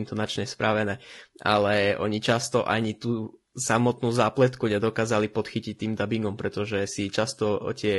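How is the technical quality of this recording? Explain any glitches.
The speech carries plainly audible coding damage from start to finish, consistent with low-delay AAC compression. Voiced sounds come out rough and grainy, with noise filling the gaps between harmonics. The likely cause is AAC-ELD: its roughly 10 ms frames are quantized coarsely at low bitrate, leaving noise between pitch harmonics, and the grain suggests a rate around 32 kbps. That smearing between harmonics, rather than pre-echo before sharp onsets, is what sets it apart from long-frame codecs.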